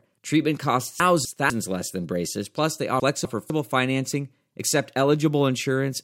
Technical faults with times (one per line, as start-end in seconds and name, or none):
1.00-1.50 chunks out of order
3.00-3.50 chunks out of order